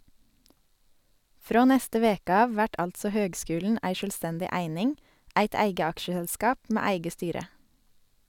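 No technical faults can be heard in this speech.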